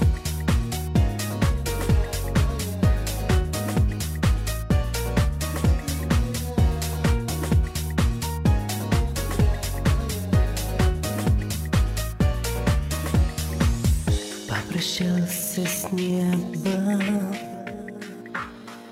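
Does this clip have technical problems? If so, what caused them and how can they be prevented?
Yes. From 15.08 s to the end at 18.91 s there is a time-stretched section. It plays at about 0.7 times speed with unchanged pitch, so it drags. Software likely stretched it to fill a length. To prevent this, edit or pad the material rather than stretching it.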